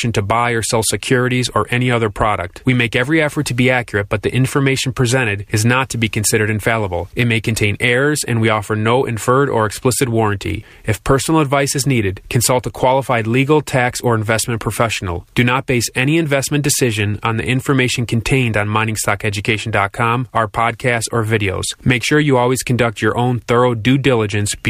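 No technical faults are audible.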